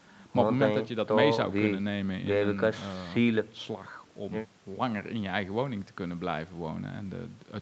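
Speech, and there is nothing technically wrong with it: the sound comes through a normal call path, with nothing above 8 kHz.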